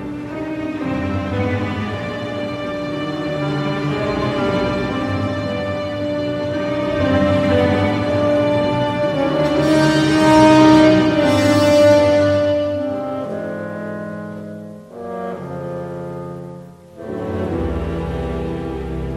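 A 100 Hz buzz rides on the sound throughout, present only with signal: the resampler restarted on every block, leaving an error at each 10 ms edge.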